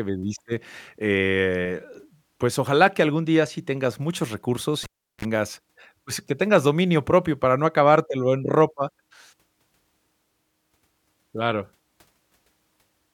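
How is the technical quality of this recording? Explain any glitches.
One glitch stands out: the cable is pulled and plugged in from 4.83 to 5.25 s. A pop cuts the speech to near silence for 365 ms, then a 41 ms burst of 60 Hz mains buzz as the plug tip makes contact, and a second pop restores the signal. A waveform shows two spikes around a flat gap, and a spectrogram shows a brief stack of harmonic lines above 60 Hz.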